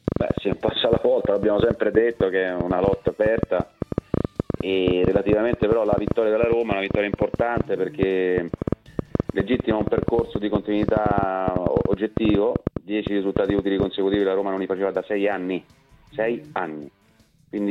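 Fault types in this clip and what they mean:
Train of clicks: from 0.08 to 14.15 s, roughly a hundred short pulses of much the same shape tick over the sound at about 8 per second, unevenly spaced, and they carry on through the pauses. Their likely source is interference from nearby equipment or a faulty connection or power supply. The clicks peak about 15 dB above the surrounding level. On the waveform they appear as narrow needles poking out of the envelope, and on a spectrogram as thin, full-height vertical lines scattered across that span.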